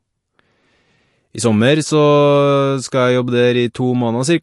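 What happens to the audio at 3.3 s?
At 3.3 s the speech carries the same damage heard across the whole clip, likely from MP3 compression. Nothing is present above 11.3 kHz, and weak frequency components flicker between frames. The result is a watery, swirly texture with smeared onsets, pointing to a low bitrate.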